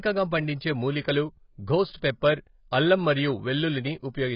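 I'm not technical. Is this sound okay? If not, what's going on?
No. The speech sounds dull and muffled from start to finish, with a watery edge and nothing above 5.5 kHz. This is likely heavy AAC compression.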